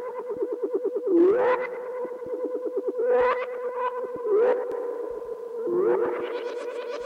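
At 4.72 s a doubled audio track kicks in and runs right to the end. A second full-band copy of the sound trails the original by roughly 150 ms, sitting around 5 dB lower. It has no decay or room colour and appears abruptly, so it reads as a flat repeat rather than an echo. The likely cause is either a slower second capture path feeding into the mix or an edit that left two out-of-step copies.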